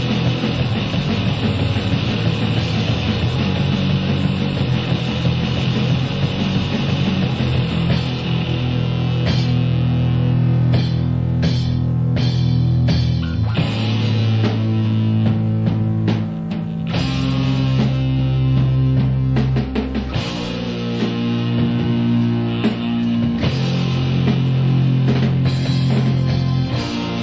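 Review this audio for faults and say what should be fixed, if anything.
Nothing here needs fixing; I listened all the way and couldn't pick out a single fault, so the audio can stay just as it is.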